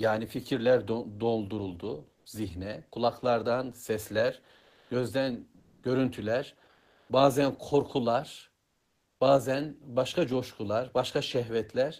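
In this speech clip the quiet background in five pauses turns into a flat, featureless hiss: 2.15–2.25 s, 4.57–4.89 s, 5.59–5.83 s, 6.71–7.09 s and 8.65–9.19 s, each 0.1 to 0.54 s long. That is comfort noise in place of the background, about 7 dB louder in the first gap and up to about 5 dB quieter in the others. The likely cause is discontinuous transmission, such as Opus DTX, where the receiver fills each pause with synthetic noise.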